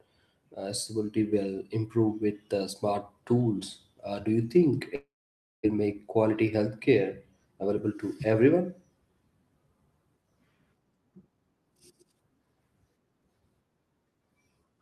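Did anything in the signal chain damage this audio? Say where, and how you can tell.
Yes. A long network dropout is the likely cause at 4.95 to 5.67 s: the speech smears into a fading buzz, then 0.55 s of blank silence on the spectrogram.

A jitter buffer speed-up runs from 6.29 to 6.89 s. The speech plays at 108% speed at unchanged pitch, with about 50 ms cut as repeated pitch-period slices, so the waveform looks compressed.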